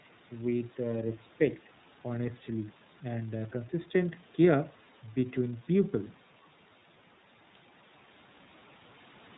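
Speech run through the iLBC codec the whole way, and the damage is plain: everything above 4 kHz is gone, and it comes out rough and slightly synthetic. That fits iLBC at 13.33 kbps with 30 ms frames, each frame coded on its own without help from the previous one.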